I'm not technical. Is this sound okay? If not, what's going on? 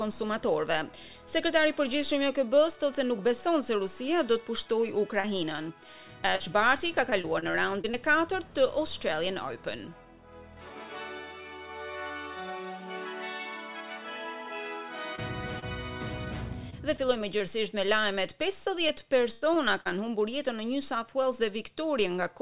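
No. There are two kinds of dropout, typical of an internet call where bits of the audio arrive late or not at all.

Short concealed packet loss at about 5.2, 5.56, 6.36, 15.15 and 15.6 seconds: each time a sliver of sound, 20 to 40 thousandths of a second, went missing and was patched by stretching what came before, heard as one quick smear or wobble.

Repeated packet loss (robotic sound) from 7.1 to 7.95, 16.7 to 17.4 and 18.9 to 19.9 seconds: several gaps close together, making the sound choppy with pieces missing. The longest gap, near 19 seconds, is about a tenth of a second.

The call line itself also cuts everything above 4 kHz, so the sound is dull throughout.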